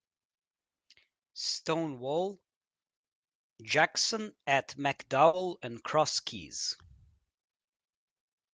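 A burst of packet loss hits at 5.27 to 5.35 s. Several packets in a row arrived too late or not at all, so the receiver stretched the last sound for about 60 ms while fading it into a held buzz or hiss. Speech then picks up further on, with the missing stretch skipped.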